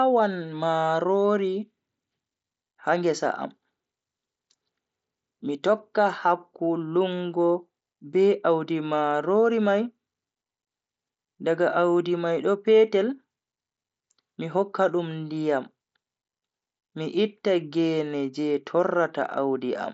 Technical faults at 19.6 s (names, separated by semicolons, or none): none